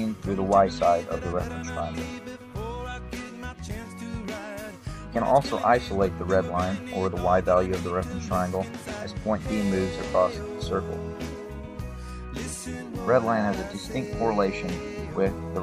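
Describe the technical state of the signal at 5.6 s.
At 5.6 s the signal is intact, with no audible technical fault at that point.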